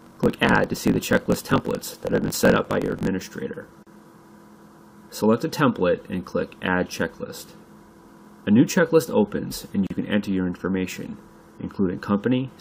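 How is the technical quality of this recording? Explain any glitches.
The recording has two kinds of glitch.

From 0 to 3.08 s there is a block size mismatch (truncated). One stage writes longer blocks than the next one reads, so each block's tail is dropped. That gives a buzz at 46.9 Hz and audio running 1.12 times too fast. The buzz rate fits a 1024-sample read.

At 3.83 to 3.87 s and again at 9.87 to 9.90 s there is a gap at a join of encoded pieces. The gaps are 38.5 ms and 37.2 ms long, six seconds apart. Separately encoded pieces were joined untrimmed, so encoder delay and end padding leave silence. The sound then resumes where it stopped.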